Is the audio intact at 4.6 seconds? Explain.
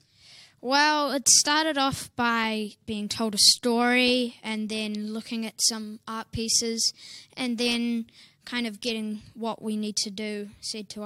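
Yes, the audio at 4.6 seconds is intact, with no dropout, click, distortion or other fault at that point.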